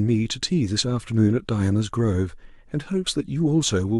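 No technical faults can be heard in the recording. Nothing in the speech calls for comment from an engineering standpoint.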